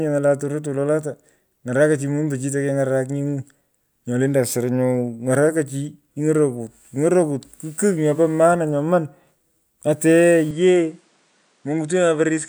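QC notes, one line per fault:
10.51–12.48 s, input switched to a poorer device: audio abruptly loses everything above 10.4 kHz, drops a few dB, and gains a faint new noise floor; likely an input device change.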